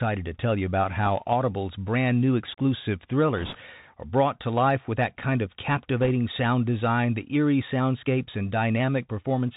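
Throughout the speech the Bluetooth CVSD headset codec is plainly audible. The one-bit delta modulation, consistent with a 64 kbps stream, keeps nothing above 4 kHz, so the sound is telephone-narrow. Because the adaptive step cannot follow fast, loud rises, s sounds turn scratchy and a fine granular hiss sits under everything. That hiss and the slope-overload roughness set it apart from a plain low-pass band limit, which would sound dull but clean.

From 3.38 to 3.55 s, between "brand new exclusive" and "are brought to life", there are bit errors on the Bluetooth voice link. They recur from 6.02 to 6.11 s, between "with that kind of" and "sound design the eerie". Roughly a couple of percent of bits are flipped. Each bit carries little weight and the decoder recovers quickly, so these bursts are a rushing crackle laid over the audio, with no sharp clicks or silent gaps of the kind that dropped packets leave.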